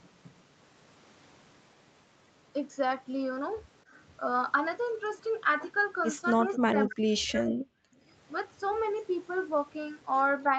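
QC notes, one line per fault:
6.34–7.8 s, speech suppressed in double talk: the speech dips by up to about 40 dB, losing roughly a second in pieces. This is likely the echo canceller turning down overlapping talk.
7.18 s, echo leak: a brief, faint copy of the sound returns 260 ms late, about 20 dB below the speech. This is likely loudspeaker echo slipping past the canceller.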